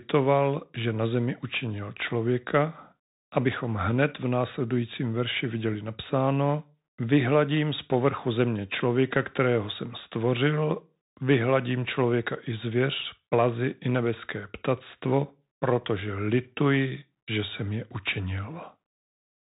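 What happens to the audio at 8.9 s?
At 8.9 s the speech sounds muffled and boxy, with scratchy s sounds and a grainy hiss beneath it, as it does through the whole clip. That is the Bluetooth CVSD headset codec: one up-or-down bit per sample, consistent with a 64 kbit/s stream, cuts everything above 4 kHz and distorts when loud high sounds outrun its adaptive step.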